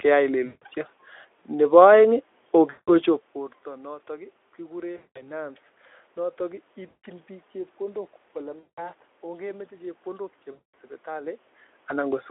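Six dropouts here, each one VoIP packet loss concealed by the speech codec: 0.45–0.64, 2.69–2.90, 4.97–5.29, 6.87–7.05, 8.59–8.90 and 10.51–10.74 s. The Speex decoder papers over 160 to 220 ms of missing audio, which fits runs of 20 ms frames, by repeating its last pitch and filter and fading the gain. You hear the speech smear into a buzzy tone or coloured noise that fades, and it stays weak or distorted just after each gap.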